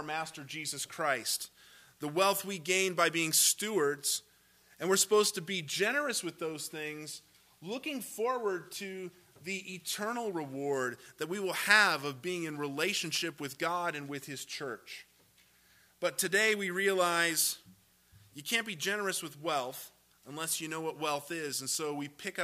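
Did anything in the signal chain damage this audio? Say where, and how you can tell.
No, nothing in the signal chain audibly damaged this audio. There is no point in the clip where any stage, from wiring and conversion through to storage and playback, leaves a mark that can be heard.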